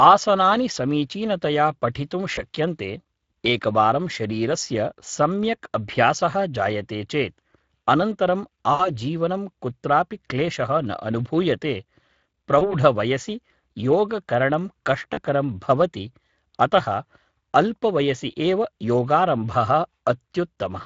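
The Speex codec colours the whole speech clip. Its damage is plainly audible, a hoarse, noisy texture that fits a rate near 20 kbps.

VoIP packet loss concealed by the speech codec appears at 2.35–2.44 s after "आसनानि समीचीनतया पठितुं", 8.73–8.90 s, 12.59–12.74 s, and 15.13–15.19 s before "भवति अतः". The decoder stretches its last sound into a fading buzz or coloured noise.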